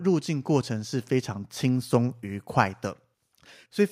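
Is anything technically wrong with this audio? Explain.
No, nothing technical is wrong.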